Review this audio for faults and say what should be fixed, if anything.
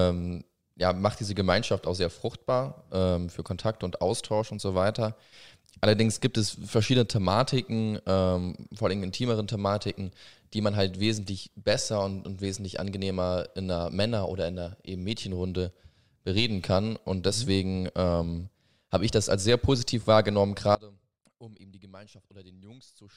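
At 20.75 s, right after "als sehr positiv wahrgenommen", the speech cuts out abruptly and never returns. This audio dropout to a faint residue runs to the end. Only a weak leak remains, roughly 25 dB down. The likely cause is a lost feed while the path after it stayed live. Secure the connections and monitor input levels during recording, so a break is caught and the passage re-recorded.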